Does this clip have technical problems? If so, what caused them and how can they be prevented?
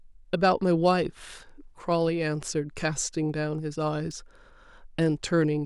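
Yes, at 4.11 s a single sharp click, likely dropped samples: a handful go missing, so the waveform jumps abruptly. Prevent it with adequate buffering and uninterrupted capture.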